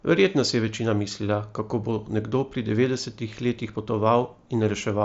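No technical faults are audible.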